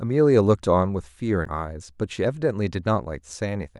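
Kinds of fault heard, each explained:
Damaged data in a compressed stream: corrupted bytes in the encoded speech make the decoder misread frames and resynchronise, producing a short glitch from 1.43 to 1.48 s, about 50 ms.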